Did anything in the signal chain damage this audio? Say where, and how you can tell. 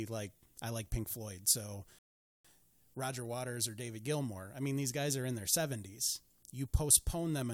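Yes: the speech drops to silence from 1.99 to 2.45 s, then picks up exactly where it stopped. This rebuffering stall at playback adds 0.46 s when the player's buffer runs dry.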